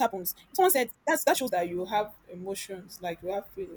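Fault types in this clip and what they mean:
Time-stretched section: The speech from the start to 1.52 s runs at nearly twice normal pace, about 1.97 times, yet its pitch stays put. It sounds rushed, then the pace drops abruptly. Software likely squeezed it by dropping short pieces.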